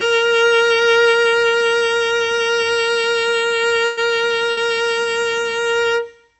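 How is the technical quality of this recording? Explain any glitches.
The recording has two short dropouts, heard through a call-style path whose codec limits the top end to around 8 kHz, consistent with Opus at a modest bitrate near 40 kbps.

At 3.85 to 4.00 s and again at 4.51 to 4.60 s, the music briefly freezes into a smeared, fading continuation and then jumps ahead. This is a burst of packet loss. The receiver extended the last sound for about 115 ms and then about 57 ms before resuming, skipping roughly 120 ms and 60 ms of music.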